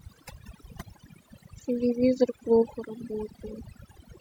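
From start to finish, the speech carries overdone noise removal. A noise reduction stage was pushed far too hard on a noisy recording, so any frequency band sitting close to its noise estimate gets cut deep or muted outright, and the softer parts of the voice are caught along with the noise. Between phrases the background collapses to near silence dotted with twinkling specks.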